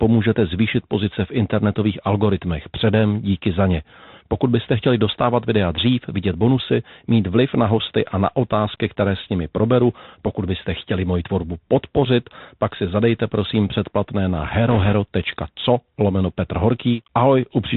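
From start to finish the speech has passed through a Bluetooth CVSD headset codec, which sends one bit per sample saying only whether the waveform rises or falls, with a step size that keeps adapting; the plainly audible damage fits a 64 kbps CVSD link. Everything above 4 kHz is gone, leaving the speech boxy and narrow. Sharp, loud high sounds outrun the step size and distort, s sounds turn scratchy, and a grainy hiss sits underneath.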